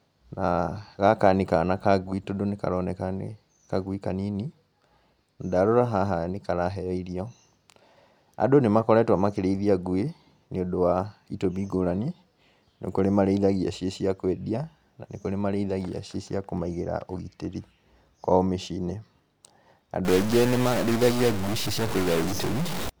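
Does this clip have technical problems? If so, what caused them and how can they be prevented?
Yes. From 20.05 to 22.90 s the speech turns harsh and buzzy, with noise filling the pauses. This is likely a stuck bit, one data bit frozen, adding errors near -25 dBFS. Prevention: check converter wiring and run bit-pattern tests before recording.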